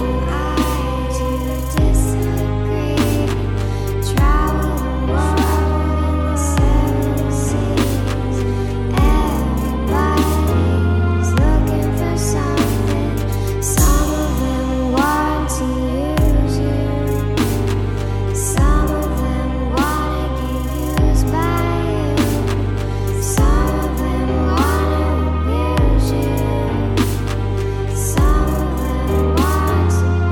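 Nothing here stands out as a technical fault; the audio runs along without any glitches, dropouts or other problems to point to.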